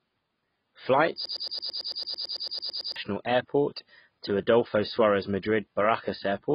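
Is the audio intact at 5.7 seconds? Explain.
No. At 5.7 seconds the speech is still carrying the AAC compression damage that runs through the whole clip. Nothing sounds above 5 kHz, and what remains is dull and smeared, with a warbling, fizzy edge on sibilants. That points to AAC-LC at a very low bitrate, which fits roughly 16 kbps. It is likely the encoder quantising coarsely and dropping bands. A simple low-pass filter would sound muffled but clean, without this watery swirl.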